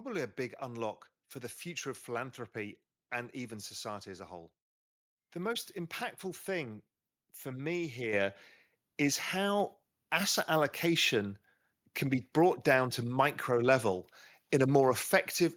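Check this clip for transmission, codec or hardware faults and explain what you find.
One fault stands out. At 8.13 s, just after "impactful thing for me", the voice and the background noise jump up together by about 7 dB in a single step. This is the microphone volume stepped up: the call software judged the input too quiet and raised the device's input volume at once.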